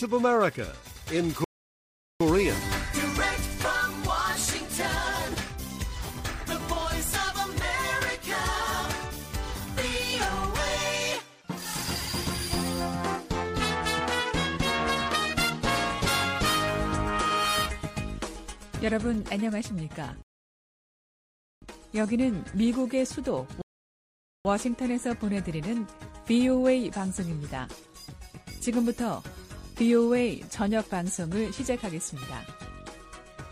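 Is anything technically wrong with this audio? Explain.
Yes. Three rebuffering stalls occur, at 1.44–2.21 s, 20.22–21.62 s and 23.62–24.45 s, lasting 0.76 s, 1.40 s and 0.83 s. Each time the player exhausts its downloaded data, the sound drops to silence, then resumes exactly where it stopped, with nothing skipped but time added.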